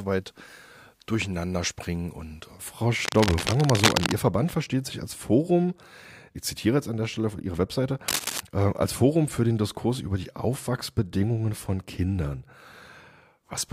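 From 3.04 to 4.15 s a burst of cable scratch noise rasps over the sound at about the same level as the signal, and a shorter, quieter burst, a few decibels lower, returns from 8.08 to 8.40 s. The likely cause is a worn cable or connector being moved, its contact resistance jumping erratically. On a spectrogram both appear as ragged broadband smears; the waveform shows dense, irregular spikes.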